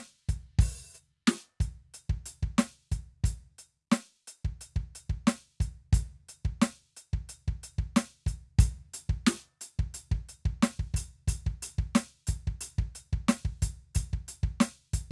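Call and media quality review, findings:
Nothing to flag on this music clip; no faults turned up anywhere in the listen.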